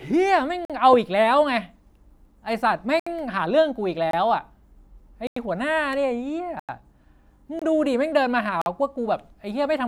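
Speech, broken by seven blocks of digital silence at 0.65, 3.00, 4.11, 5.27, 6.60, 7.59 and 8.62 s. Each one drops hard to silence and back, with no fade. The gaps last 23 to 93 ms. Most fit whole 1024-, 2048- and 4096-sample buffers left unfilled.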